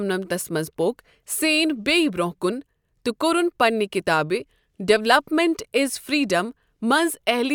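A speech recording with no technical fault to report. Nothing in it calls for a time or a cause.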